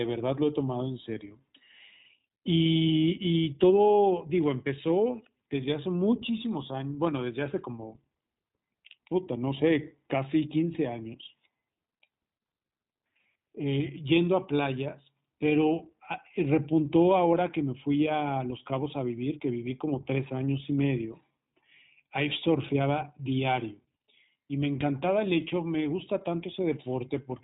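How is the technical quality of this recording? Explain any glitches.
The recording has one fault, running the whole length: the speech has been through the iLBC codec. Nothing above 3.8 kHz survives, and the damage is plainly audible. Each short frame of excitation is coded independently, about every 20 ms, which fits iLBC's 15.2 kbps mode. That gives the speech a rough, slightly synthetic grain. A simple low-pass filter would only dull the sound, whereas this adds a buzzy coarseness on top of the narrowband sound.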